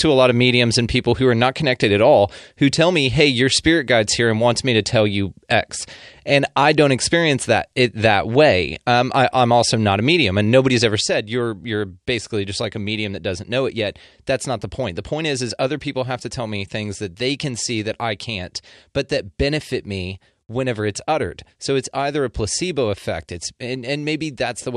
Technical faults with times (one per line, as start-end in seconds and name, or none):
11.01-24.76 sudden gain jump